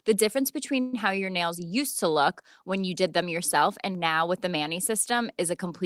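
At 0.80 s the speech stalls for about 126 ms, the last sound stretched into a fading buzz until 0.94 s, then resumes exactly where it stopped with nothing lost. This call audio freeze likely came from delayed packets draining the jitter buffer.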